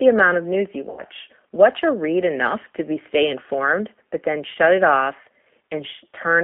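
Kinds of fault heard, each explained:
G.729 codec: The speech is rebuilt by a low-rate model of the vocal tract and pitch rather than carried as a waveform, giving a roughness and synthetic edge consistent with an 8 kbit/s codec, plainly audible throughout. Only the telephone band of roughly 250 Hz to 3.4 kHz survives. On a spectrogram, energy stops sharply near 3.4 kHz and thins below 250 Hz, and harmonics look smeared, with a grainy texture between them.
VoIP packet loss concealed by the speech codec: Twice, audio goes missing and the decoder fills the gap by extending its last pitch and spectral shape at falling gain. From 0.90 to 1.03 s about 80 ms is lost, which fits four 20 ms packets, and the sound is stretched and fades. A shorter 20 ms gap at 4.53 to 4.58 s gives a brief smear. The waveform shows repetitive, shrinking periods, and the spectrogram shows frozen, flat harmonics.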